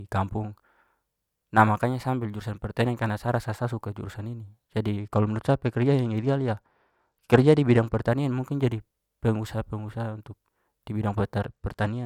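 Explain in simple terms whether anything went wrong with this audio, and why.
Something did go wrong, twice. Just after "sa suka jurusan ini", from 5.00 to 8.07 s, the speech turns dull and gritty. The same thing happens again from 11.40 s to the end. This is a Bluetooth SBC bit pool drop. The wireless link got crowded, so the phone squeezed the sound into far less data to keep it playing. The crisp high sounds were dropped, and the rest was stored roughly, which adds a sandy grain.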